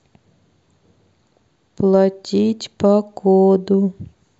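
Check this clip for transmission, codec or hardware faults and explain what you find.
No faults can be heard anywhere in the recording.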